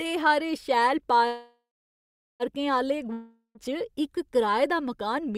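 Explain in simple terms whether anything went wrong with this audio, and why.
Call audio freeze, from 1.27 to 2.43 s, right after "हारे शैल". The speech stops and the last sound is stretched into a fading buzz that sinks to near silence for roughly the final 0.8 s. The likely cause is that the call's data packets were held up in transit and the receiver's small reserve of audio ran out. When the packets arrived, the speech picked up where it had stopped, so nothing is lost, but everything after is about 1.1 s late.

Long network dropout, from 3.13 to 3.58 s. Here the speech again breaks into a brief fading buzz, then goes quiet for about the last 0.13 s before returning. This time the missing stretch, about 0.42 s of speech, never comes back: the voice resumes further along, skipping whatever was said in that gap. That points to audio that was likely lost on the network rather than merely delayed.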